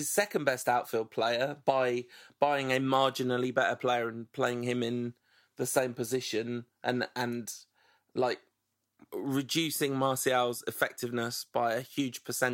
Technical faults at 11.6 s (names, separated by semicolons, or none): none